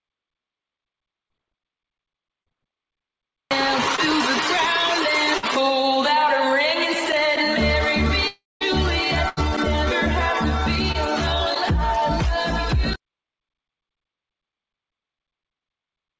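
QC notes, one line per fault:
1.28–5.60 s, scattered short gaps: about five tiny holes where packets went missing or came late, the longest around 50 ms. The receiver papered over each by stretching the last bit of sound, so you hear quick ticks and little smears rather than actual silence.
8.27–8.62 s, long network dropout: the sound turns into a fading buzz or hiss, then goes dead for about 200 ms, and roughly 340 ms is simply gone when it resumes. That's likely a burst of lost packets with the receiver extending the last sound until it gave up.
8.62–10.96 s, scattered short gaps: right after the dropout there are about three more small patched holes, the longest around 70 ms. Each one briefly stretches the previous sound, so the audio hiccups or smears a little. This is all on top of a call-codec path with nothing above 8 kHz.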